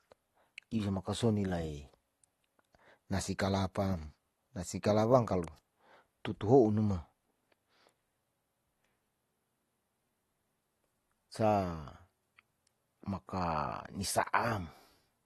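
AAC compression runs through the whole speech clip: nothing sounds above 12.5 kHz, and the top end is dull and smeared with a fizzy, warbling edge on sibilants. This is likely a low-bitrate AAC-LC encode, around 32 kbps, starving the frequency lines of bits.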